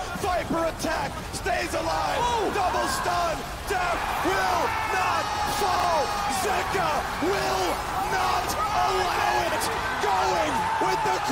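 At 1.12, 5.76, 8.4 and 9.48 s there are chunks out of order: a 40 ms chunk arrives one slot late and swaps with its neighbour, so each 80 ms moment sounds jumbled.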